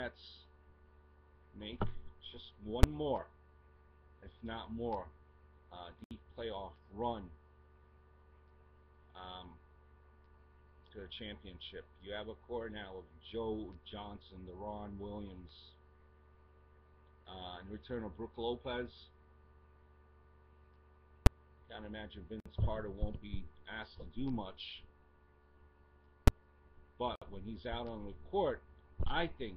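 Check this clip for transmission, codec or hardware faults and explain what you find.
Two faults recur, three times each.

Invalid numbers at full scale cause sharp bangs at 2.83, 21.26 and 26.28 s. A calculation broke, pinning about 5.8 ms at one extreme value, which fits a 256-sample block.

A gap at a join of encoded pieces causes brief dropouts at 6.04 s (68 ms), 22.40 s (55 ms) and 27.16 s (61 ms). Separately encoded sections kept their padding silence, and the sound then resumes where it stopped.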